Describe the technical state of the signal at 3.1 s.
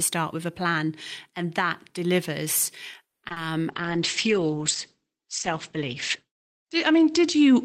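At 3.1 s the speech is in a call audio freeze from 3.07 to 3.24 s: about 150 ms of silence, then speech resumes exactly where it stopped. That points to a likely jitter-buffer underrun from delayed packets. Unlike packet loss, nothing is skipped; everything afterwards simply arrives 150 ms later.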